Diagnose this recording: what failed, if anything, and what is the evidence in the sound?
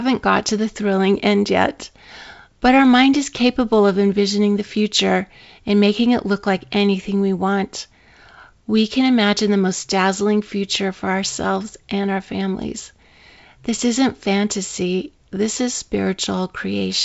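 Nothing failed here: the speech comes through a wideband phone path with its content stopping around 7.7 kHz, which fits G.722 wideband telephone coding at its full 64 kbit/s rate, and any coding trace it leaves is faint at most.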